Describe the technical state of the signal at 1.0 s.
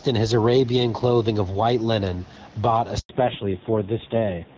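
At 1.0 s, gain pumping is present, as it is throughout the clip. The gain swings by around 5 dB, pulling loud and soft parts closer in level and squashing the sound. The likely cause is excessive input gain, with a fast limiter pulling the level down on peaks.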